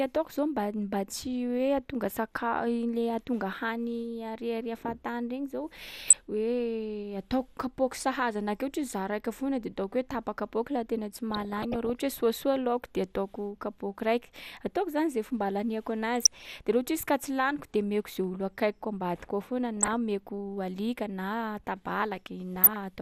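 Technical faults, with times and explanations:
Throughout, MP2 compression: the speech sounds dull, with a gurgling, granular edge as upper sub-bands drop out and the remaining ones are coarsely quantised, likely from MPEG Layer II coding at a low rate consistent with about 80 kbps. Unlike burbling, it is steady.
6.03–6.21 s, 11.31–12.00 s, 16.20–16.45 s, 19.77–19.93 s and 22.55–22.76 s, DAB burbling: bursts of burbling as bit errors slip past error correction, putting short blips of noise into individual sub-bands. The longest burst, at 11.31 s, lasts 0.7 s. These bursts stand apart from the constant codec dullness.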